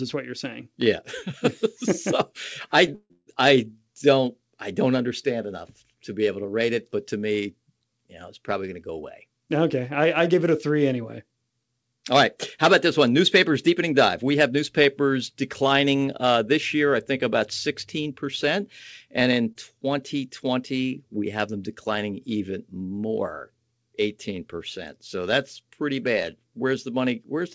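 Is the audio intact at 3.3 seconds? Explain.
Yes, with a caveat: 3.3 s falls just after a burst of repeated stalls (stutter) running from 2.86 to 3.29 s. Across that span the jitter buffer ran dry three times as packets arrived late, and the receiver stretched the last sound to fill about 310 ms, roughly three quarters of the span, with the longest wait about 150 ms. No audio is lost, but the passage drags and judders before playback resumes at normal pace.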